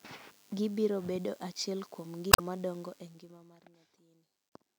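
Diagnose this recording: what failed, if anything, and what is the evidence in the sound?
The analogue audio circuit is picking up DECT cordless phone buzz for the whole clip. A thin, steady buzz sits roughly 30 dB below the speech. It comes from a nearby DECT handset or base transmitting a radio burst every 10 ms, which the circuitry rectifies into a 100 Hz repetition. On a spectrogram it shows as a comb of horizontal lines at 100 Hz and its many harmonics, continuous from start to end. The waveform carries a fine periodic ripple under the speech.

The compressed stream has damaged data in two places, so the fault lies in storage or transmission before the codec decoded it. Right after "bedo achiel kuom" there is a glitch from 2.29 to 2.40 s, and a shorter blip from 4.49 to 4.52 s. Corrupted bytes made the decoder misread frames, lose sync and hunt for the next header. The waveform shows an abrupt discontinuity at each event.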